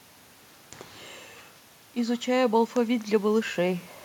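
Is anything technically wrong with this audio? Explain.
Yes. From 1.93 to 3.88 s there is automatic gain rising. The talker moved away around 1 s, and the input fell by about 13 dB. The gain control responded slowly, adding about 4 dB over two seconds. The speech and the room noise swell up together.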